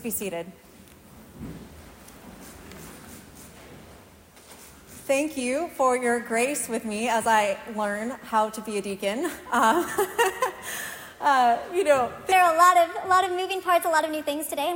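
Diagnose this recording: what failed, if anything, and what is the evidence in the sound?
The final section plays at the wrong speed, likely because a playback or editing stage ran it against the wrong clock. From 12.32 s to the end, the sound runs 1.22 times too fast, so its pace hurries and its pitch rises about three semitones.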